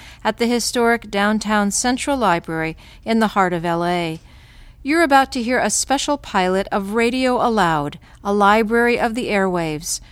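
No technical fault can be heard anywhere in the audio. Nothing in the sound calls for a note on how it was captured or reproduced.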